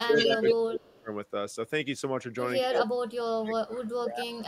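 With both sides likely talking at once, the echo canceller turned the near talker down: from 0.0 to 1.1 s the speech suppressed in double talk dips by up to about 30 dB. Over it, from 0.13 to 0.56 s, an echo leak likely left from a loudspeaker returns a copy delayed 237 ms, about 5 dB louder than the speech. Faint echo scraps follow at 0.97 to 1.01 s (239 ms) and 2.64 to 2.79 s (246 ms), while suppression again pulls speech down by up to about 20 dB at 2.68 to 2.89 s and about 25 dB from 3.41 s to the end.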